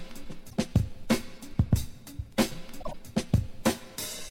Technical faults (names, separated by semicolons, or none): corrupt frame decoded